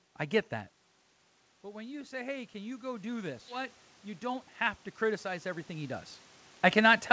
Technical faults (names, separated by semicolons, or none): automatic gain rising; skip ahead; jitter buffer speed-up